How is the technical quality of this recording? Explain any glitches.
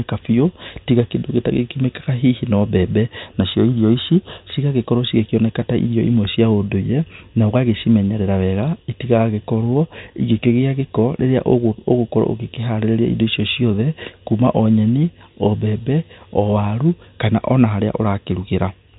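Nothing glitchy turns up here; it's ordinary telephone-band speech coming through G.711 coding, topping out around 3.8 kHz as that format does, with no faults to point to.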